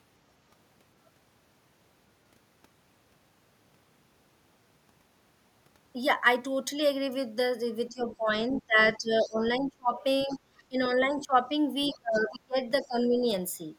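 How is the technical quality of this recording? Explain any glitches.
Echo-cancellation trouble hits the second half of the recording, where both ends of the call seem to talk at once.

Speech suppressed in double talk appears from 7.89 to 9.98 s, 10.24 to 11.53 s, 11.88 to 12.60 s and 12.82 to 13.24 s. The echo canceller likely could not tell the local talker from loudspeaker echo and turned everything down. The speech dips by roughly 25 to 30 dB, or about 15 dB in the last stretch.

The other side's voice leaks through at 8.10 to 8.16 s, 9.21 to 9.32 s, 10.29 to 10.38 s and 10.84 to 10.90 s. These are likely residual loudspeaker echo the canceller failed to remove from the microphone. Each is a brief, faint scrap of a second voice, roughly 20 to 30 dB below the main speech.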